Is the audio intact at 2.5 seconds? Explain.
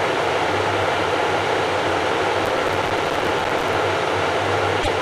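No. From 2.45 to 3.74 s a gritty burst of crackle tears across the sound. This is processor overload crackle: the processor repeatedly misses its deadlines, and each missed buffer drops out as a tiny hard-edged silence. The clicks are spaced finely enough to suggest buffers of roughly 3 ms, with dozens skipped.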